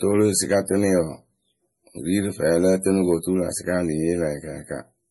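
Throughout the clip, the speech has nothing above 11.5 kHz and carries the smeared, swirly texture of heavy MP3 coding. The likely cause is low-bitrate audio saved at a high bitrate: a file coded at a rate that fits about 32 kbit/s MP3 was encoded again at around 260 kbit/s. The larger second file can't restore the detail the first pass discarded, so the dull top end and the coding artefacts remain.

From 0.06 to 1.00 s, and again from 2.17 to 3.14 s, hard clipping occurs. The signal runs past what a stage in the chain can pass, by about 4 dB in the first stretch and about 3 dB in the second, so its peaks are sliced flat. Those squared-off tops add harmonics high in the spectrum, heard as crackle on the peaks of the speech within each span.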